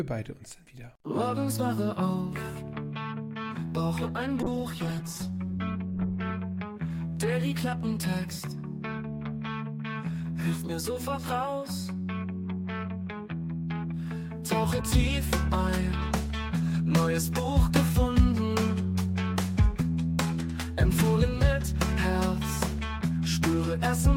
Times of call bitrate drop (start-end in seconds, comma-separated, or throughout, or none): 4.43-6.39